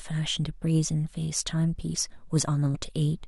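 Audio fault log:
2.74–2.76 s, damaged data in a compressed stream: a short glitch of about 22 ms cuts across the speech, heard as a chirp, squawk, click or short hole. Some bytes in the encoded stream at this point were lost or corrupted, so the decoder misread the affected frame, lost its place in the bitstream and had to search for the next valid frame header before it could produce normal audio again.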